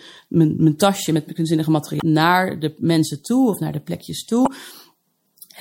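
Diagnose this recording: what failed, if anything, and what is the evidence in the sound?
The codec stage failed, and the cause is likely MP3 compression at a low bitrate. Throughout the speech there is a plainly audible watery, swirly texture, with s sounds turning metallic and consonant onsets smeared. The damage level fits a bitrate around 64 kbps. A spectrogram would show a hard ceiling where the treble is cut off, and above the dense low band, scattered time-frequency blocks flickering on and off from frame to frame as weak lines are zeroed.

The storage or network path delivered damaged data in a compressed stream at two points. The first is 1.98 to 2.02 s, between "mijn tasje met kunstzinnige" and "naar de mensen toe". The second is 4.43 to 4.48 s. Each is a brief glitch. The decoder misread the corrupted frames, lost sync and hunted for the next header. On a waveform each shows a short discontinuity. 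A spectrogram would show a broadband vertical smear.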